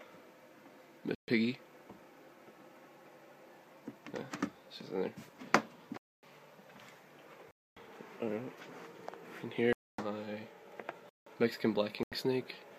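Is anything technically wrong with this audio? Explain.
Yes. The audio has repeated blocks of digital silence. They occur at 1.15 to 1.28 s (about 133 ms), 5.97 to 6.23 s, 7.51 to 7.77 s, and 9.73 to 9.98 s (each 256 ms), 11.09 to 11.26 s (about 171 ms), and 12.03 to 12.12 s (about 85 ms). In each block the sound drops to silence. The last two gap lengths fit 8192- and 4096-sample buffers at 48 kHz, which points to output buffers left unfilled. The sound cuts off and returns with no fade, and the longer blocks are heard as short holes.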